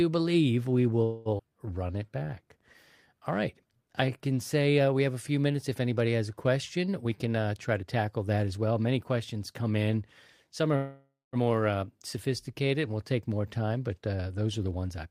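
Speech carrying a cluster of network-timing faults early on, a long speed-up mid-clip and a second freeze near the end. The first call audio freeze starts at 1.03 s, right after "believe we", and runs to 1.28 s. The receiver stretches the last sound into a fading buzz or hiss for about 0.22 s, then resumes where it stopped with nothing lost, so the gap is simply inserted into the timeline. The cause is likely packets held up in transit until the jitter buffer ran dry. Almost immediately a skip ahead follows at 1.38 to 1.42 s, still just after "believe we". Roughly a tenth of a second of audio is gone, and the two sides are butted together with only a tiny 13 ms fill, which fits the buffer discarding audio once the delayed packets arrived. From 1.49 to 2.24 s a jitter buffer slow-down plays the speech at 85% speed with unchanged pitch, adding 119 ms by repeating pitch periods so that sounds are drawn out while the buffer rebuilds its reserve. 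A jitter buffer speed-up runs from 6.91 to 8.71 s, starting after "anybody has a", at 112% speed. Roughly 0.2 s is trimmed in short pitch-period cuts to bring an overfull buffer back to target, so the delivery sounds hurried at normal pitch. A second call audio freeze from 10.76 to 11.36 s fills about 0.57 s: the held sound decays and the final 180 ms is silence before playback resumes intact. A final speed-up at 14.63 to 15.07 s runs at 113% and removes about 70 ms the same way.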